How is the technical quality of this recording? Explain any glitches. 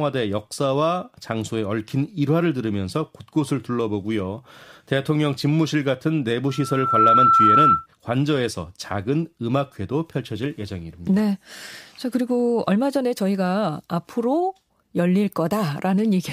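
There's one clear glitch here, a loudspeaker feedback squeal in the middle of the speech. From 6.48 to 7.87 s a steady tone at 1.3 kHz rises up over about half a second until it sits roughly 10 dB above the voice. The mic is picking up the speaker it's feeding, and at 1.3 kHz the loop gain tops one, so that frequency keeps reinforcing itself and swells into a single squealing pitch until the loop is broken.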